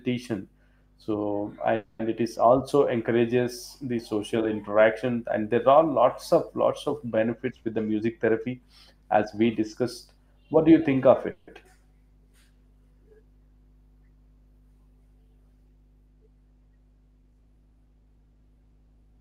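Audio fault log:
Throughout: mains hum. A steady low tone at 50 Hz sits under the speech at about 30 dB below it, as when a ground loop or nearby transformer leaks the power line into the signal. It stays constant through pauses, so it is most noticeable between phrases. On a spectrogram it is an unbroken horizontal line at 50 Hz, with some low harmonics above it, across the full clip. On a zoomed-in waveform it is a small, regular 20 ms ripple visible in the quiet stretches.
1.75–2.01 s and 11.31–11.49 s: call audio freeze. The speech stalls, and the last sound is drawn out into a buzz or hiss that fades for 240 ms at the first point and 160 ms at the second. It never drops to silence, and the speech resumes exactly where it stopped, so nothing is lost but the timing is pushed back. The likely cause is delayed packets leaving the jitter buffer empty while the receiver filled the wait. On a spectrogram the frame before the stall is smeared flat and fading. 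The waveform shows a decaying, repetitive stretch in place of normal syllables.
7.49–9.41 s and 17.24–19.18 s: jitter buffer speed-up. The receiver had too much audio queued and trimmed it by cutting out tiny pitch-period pieces again and again. The speech runs about 12% fast in the first stretch, removing about 200 ms, and about 4% fast in the second, removing about 70 ms. The pitch stays the same, so the first stretch sounds hurried rather than higher. On a spectrogram the harmonic spacing is unchanged while the syllables are squeezed closer together. The waveform shows many tiny splices at period boundaries.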